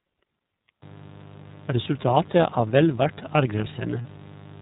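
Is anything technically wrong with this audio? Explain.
Yes, three technical faults can be heard.

The iLBC codec damage runs through the whole clip and is plainly audible. iLBC is a narrowband voice codec that codes each 30 ms frame's excitation on its own, without relying on the previous frame. The result here fits its 13.33 kbps mode. Nothing above 4 kHz survives, so the speech sounds muffled and band-limited, with a rough, slightly synthetic texture in place of a natural voice.

Mains buzz starts at 0.82 s and continues to the end. It comes from the 50 Hz supply, where something like a dimmer, a rectifier or a missing shield injects sharp switching spikes twice per cycle, 100 times a second. Those spikes carry a long series of 50 Hz harmonics reaching into the kilohertz range. It sits at roughly 20 dB below the speech, a steady, raspy buzz under the voice.

Lost iLBC frames occur from 4.02 to 4.06 s, a gap of about 30 ms, which fits a single dropped packet. 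The decoder covered the hole by repeating the last pitch cycle blended with noise. That short stretch comes out as a briefly held, slightly buzzy vowel-like sound. Because iLBC frames decode independently, the speech snaps back to normal immediately after.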